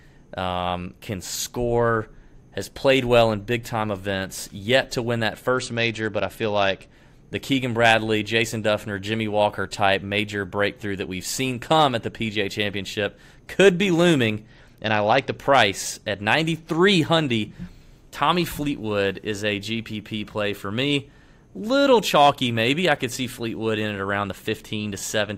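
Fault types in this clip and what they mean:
Bluetooth SBC bit pool drop: a congested link forced SBC to fewer bits, leaving upper sub-bands empty and the rest coarsely quantised. The speech dulls and turns gritty after "to win that" (5.54–6.93 s) and after "could be looming" (14.48–15.35 s), consistent with roughly 84 kbps.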